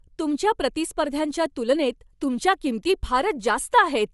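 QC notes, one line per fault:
Throughout, Bluetooth LC3 compression: the speech carries a plainly audible grainy, breathy edge and nothing above 11.5 kHz, likely from LC3 coding that fits 48 kbps with 10 ms frames.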